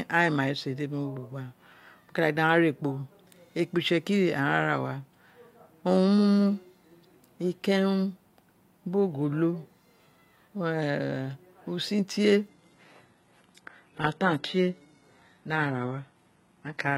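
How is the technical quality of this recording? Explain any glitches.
The recording has one clear glitch: an adaptive stream at a lower bitrate takes over for the last stretch. At 12.48 s, right after "usun tie", the connection evidently slowed and the player switched to a much leaner version of the stream without any gap, staying there until the end at 16.98 s. The speech suddenly loses its top end, with nothing above 11.8 kHz, and there are more codec artefacts. The change points to a drop from an AAC-LC encode of around 96 kbit/s to a low-rate HE-AAC stream near 16 kbit/s.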